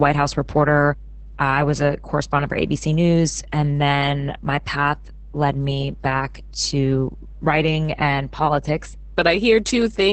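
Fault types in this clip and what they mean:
Mains hum: a ground loop or nearby transformer is leaking the 50 Hz power line into the signal, so a steady low drone with a few low harmonics runs under the whole speech clip, sitting only about 10 dB below the speech itself.
Opus voice compression: the speech was squeezed through Opus in its SILK voice mode at a very low rate, around 10 kbps, with the band cut to wideband, so nothing survives above about 8.7 kHz; the excitation is coded coarsely, leaving the voice muffled, hoarse and somewhat robotic throughout.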